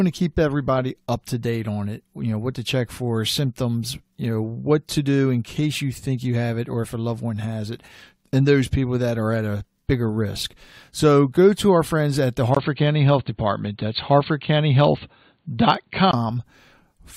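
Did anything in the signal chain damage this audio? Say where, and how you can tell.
Yes: right after "our friends at the", a 20 ms gap at 12.55 s, then audio dull above 4.5 kHz until 16.13 s, likely the input switched to a poorer device.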